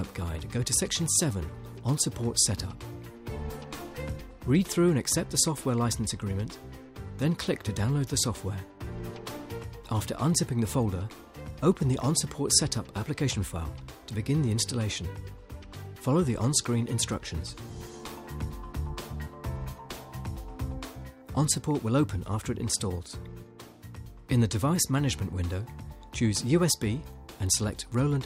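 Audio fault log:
No faults are audible anywhere in the audio.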